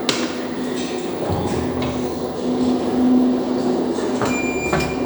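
Nothing to flag here; it's a short bit of sound with no technical faults to point out.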